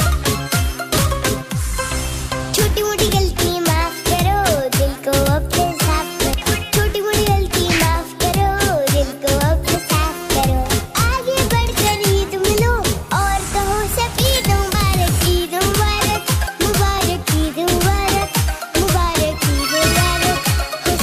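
At 6.34 s, 9.74 to 9.76 s and 14.74 s, compressed frames are skipped. The audio jumps ahead by about 150 ms, then 50 ms twice.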